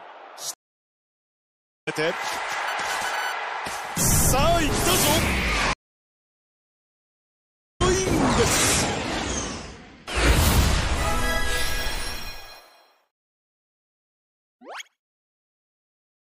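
Throughout the clip the sound is watery and swirly. The treble is cut off, sibilant and cymbal-like sounds chirp metallically, and attacks smear. The likely cause is MP3 compression at a low bitrate, consistent with about 64 kbps. The encoder runs short of bits, so it trims the top band and switches weak frequency lines on and off from frame to frame. Band-limited filtering alone would be dull but steady. This damage shimmers as it changes.

At 0.54 s the audio goes silent for about 1.3 s and returns at 1.88 s, roughly 0.7 s further on. At 5.73 s a second silence lasts about 2.1 s, ending at 7.82 s, and this time about 2 s of material is skipped. Both are a stream reconnect: the connection dropped, the player reconnected, and a fresh decoder began mid-stream. A buffer underrun would resume exactly where it stopped, and a brief dropout would be shorter. Here the timeline jumps ahead, and the sound restarts with a muted or faded first frame.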